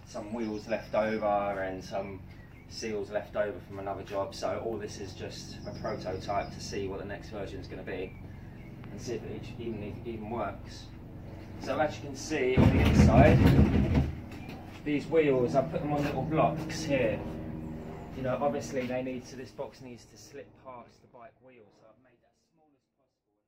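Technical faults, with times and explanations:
No technical faults; the ending fades out smoothly.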